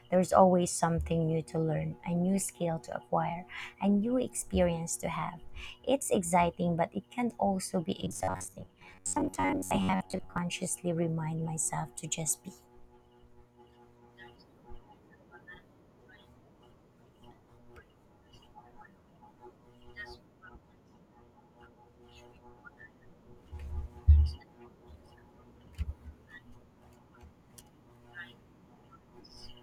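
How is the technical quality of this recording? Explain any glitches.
The recording has one clear glitch. From 8.02 to 10.38 s, robotic sound from repeated short buffers: the speech becomes a rigid, metallic buzz near 94 Hz. This is likely caused by a 10.7 ms slice being replayed for about half the audio, with real sound skipped. Unlike a mains hum, the buzz still roughly follows the speech.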